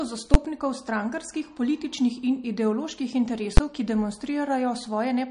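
Speech with two short loud bangs, at 0.34 s just before "strankarskih političnih in ideoloških" and at 3.57 s just after it. These are invalid numbers at full scale, where the output pins to one extreme value for about 11 ms, consistent with a 512-sample block. Throughout, the treble stops near 10.1 kHz and plainly audible watery swirl points to heavy, likely MP3 compression at a low bitrate near 40 kbps.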